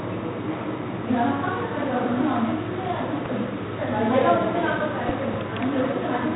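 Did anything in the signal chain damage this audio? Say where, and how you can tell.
Yes. At the codec stage, 4-bit ADPCM compression has heavily damaged the whole clip. A gritty hiss rides on every loud moment, and attacks distort where the step size lags. Nothing sits above 3.9 kHz, which fits a 32 kbps stream at a low sample rate. On a spectrogram, level-tracking broadband noise fills in under the sound, capped by a hard ceiling.

There are loud pops at 3.26 to 3.28 s (one, about 10 dB above the sound) and 5.09 to 5.36 s (two, about 15 dB above). They are likely electrical spikes in the analogue wiring or driver. The waveform shows sharp isolated spikes towering over the sound, and the spectrogram shows full-height vertical streaks.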